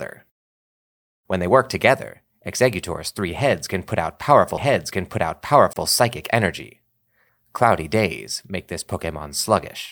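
At 5.73 to 5.76 s, just before "psychic energy", the speech drops into a gap at a join of encoded pieces. Silence of about 30 ms opens. Separately encoded segments were joined without trimming encoder delay and padding. Speech then resumes where it stopped.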